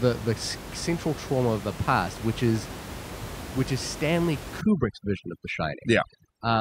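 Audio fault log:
4.61–6.61 s: overdone noise removal. From 4.61 s to the end, a noise reduction stage acts far too hard. It treats any frequency band sitting near its noise estimate as noise and drives it down or out entirely. Quiet parts of the speech fall below that line and vanish with the noise. The background collapses to near silence, dotted with twinkling specks. Earlier, room noise sits about 12 dB below the speech.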